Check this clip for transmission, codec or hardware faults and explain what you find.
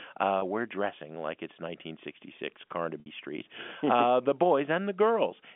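Two brief glitches in the speech point to packet loss with pitch repetition. At 0.39 s a 30 ms gap comes out as a slightly held, buzzy tone. At 3.00 s a 60 ms gap holds longer and fades toward silence before the speech returns through a short cross-fade. Audio went missing, which fits one lost packet and then two, and the receiver filled each hole by looping the last pitch period. The narrow telephone band throughout comes from G.711 coding.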